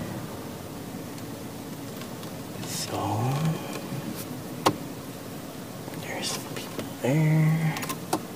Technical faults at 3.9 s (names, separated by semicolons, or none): corrupt frame decoded